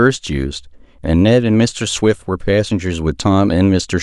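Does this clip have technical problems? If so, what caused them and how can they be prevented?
No, there are no technical problems to hear in this speech clip. With nothing going wrong, there is no cause to trace and nothing that needs preventing.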